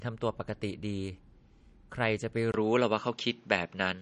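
The clip is speech, and it is plainly damaged by MP3 compression throughout. Nothing is present above 10.6 kHz, because the encoder has cut the treble at a fixed point to save bits. Weak frequency lines drop in and out between frames, so the sound turns watery and swirly, and s sounds get metallic chirps. That degree of damage fits a low bitrate of about 40 kbps. The likely cause is heavy MP3 encoding. At 2.52 s there is a short silence of about 20 ms. After it the sound changes character until the end. The top of the band falls to 7.6 kHz, so the speech becomes duller and boxier. The level shifts by around 5 dB. A faint new noise floor appears well below the speech. This is the input switched to a poorer device, likely a different microphone or a headset's call profile taking over mid-recording.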